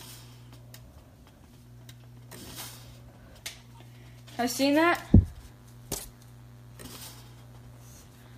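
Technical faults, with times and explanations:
5.10 s to the end: DECT cordless phone buzz. A thin, steady buzz at 100 Hz with a dense ladder of harmonics sits roughly 35 dB under the sound. A nearby DECT handset or base transmits a burst every 10 ms, and the audio circuitry rectifies each one into a click.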